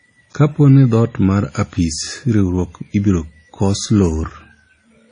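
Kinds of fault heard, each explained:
Transcoding between lossy codecs: The speech has nothing above about 9.7 kHz, and two different sets of compression artefacts sit on top of each other for the whole clip. That pattern likely comes from passing through one low-bitrate codec and then a second one. The later encoder spent its limited bits re-coding the earlier artefacts as if they were real sound, then added its own. The character fits something like WMA followed by AAC-LC, both around 32 kbit/s.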